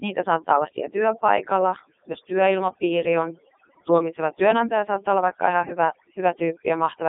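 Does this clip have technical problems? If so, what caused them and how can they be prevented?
Yes. Overdone noise removal runs throughout: bands near the estimated noise floor are cut so hard that the background drops and breaks up into twinkling specks. Prevent it by setting the reduction lower and checking quiet passages.

The speech also passes through the Codec 2 vocoder for its whole length. The voice is rebuilt from sine waves using only pitch, voicing, energy and spectral envelope, so it sounds robotic and buzzy and suffers heavy coding damage. The band runs from about 250 Hz to 3.7 kHz, with nothing above 3.8 kHz, which fits Codec 2's top 3.2 kbit/s mode. Prevent it by using a higher-rate waveform codec when the channel permits.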